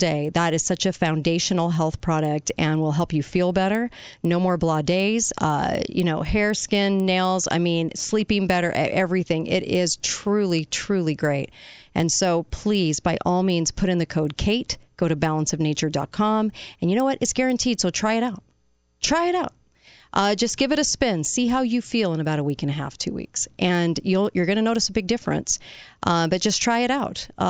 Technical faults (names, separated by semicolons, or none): resampler restarted on every block